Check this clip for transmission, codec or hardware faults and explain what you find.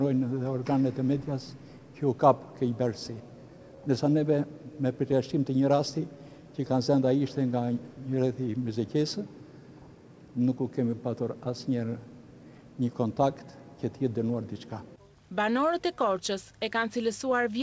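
Three timing faults turn up, two from the sender and receiver clocks disagreeing, heard through a G.722 call path with nothing above 8 kHz.

Clock drift between sender and receiver runs throughout. The sender's clock is about 2% slow, so the jitter buffer keeps draining and the receiver must stretch the audio to cover.

Repeated timing corrections run from 0.34 s to 17.42 s. The receiver repeats short pieces, playing at 98% speed and adding about 0.3 s. Each edit is small.

Scattered short gaps occur between 7.06 s and 9.04 s. A few packets were lost or late, and the receiver extended the last sound over each hole. Each gap is very brief, heard as a tick or smear.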